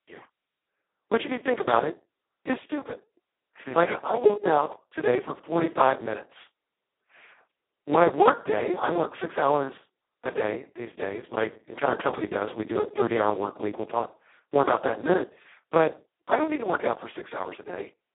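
From start to finish the speech carries heavy Speex codec damage. The sound points to the lowest, near-vocoder setting of around 2 kbps, which starves the excitation and leaves it hoarse and robotic. A spectrogram shows energy held between 250 Hz and 3.5 kHz, with nothing above 3.8 kHz.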